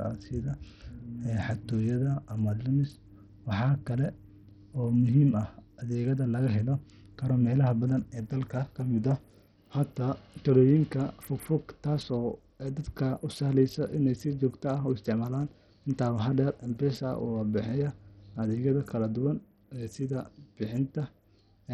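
From start to finish the speech sounds dull and gritty. The treble drops out and flickers, with a rough, aliased edge. This is likely Bluetooth SBC compression. The damage is heavy and fits a low bitrate near 64 kbps, which starves the upper sub-bands of bits.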